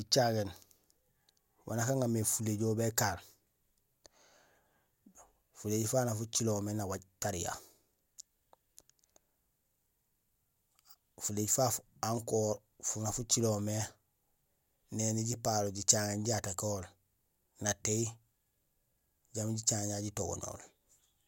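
Nothing stood out on listening to the speech here.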